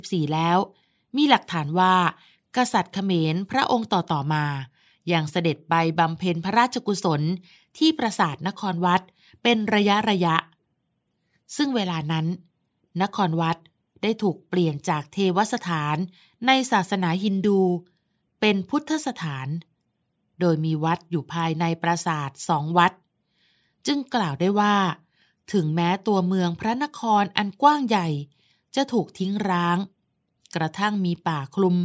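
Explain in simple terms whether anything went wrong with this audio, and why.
Nothing went wrong here: the signal stays steady and intact throughout, with no technical faults to be heard anywhere in the recording.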